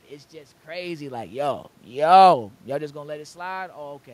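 No technical faults in this speech recording; the level changes near 1 s and 2.5 s are the talker moving relative to the microphone, and the steady background is room noise captured with it.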